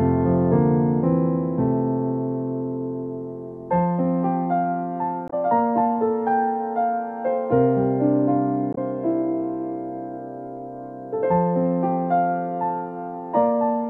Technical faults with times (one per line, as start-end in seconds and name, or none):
5.27-5.33 damaged data in a compressed stream
8.71-8.78 damaged data in a compressed stream